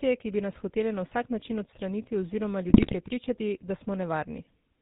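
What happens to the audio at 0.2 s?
At 0.2 s the speech carries GSM full-rate codec damage, present throughout: pulse-driven vocal-tract coding cuts everything above 4 kHz and leaves a plainly audible buzzy, gravelly roughness.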